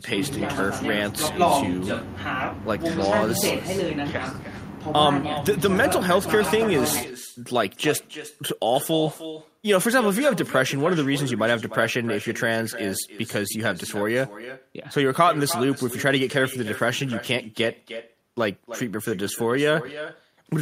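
A speech recording with echo with no canceller throughout. Every phrase returns about a third of a second later, about 13 dB quieter and thinner. A far-end loudspeaker feeds the microphone, and nothing removes it.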